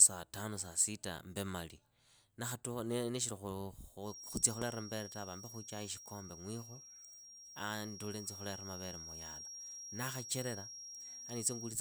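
From 4.0 s to the end, a feedback whistle at 5.6 kHz sits roughly 10 dB under the speech, thin and slowly swelling and fading, likely from a loudspeaker-to-microphone loop held just short of runaway.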